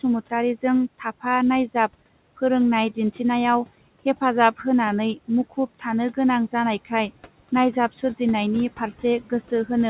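From start to finish there are noise suppressor artifacts on this speech. The suppressor pulls the steady room noise down by about 18 dB frame by frame, so the background sinks in the pauses and climbs back up under the talking. It all sits inside a band that stops at 4 kHz, which fits a G.711 A-law call leg.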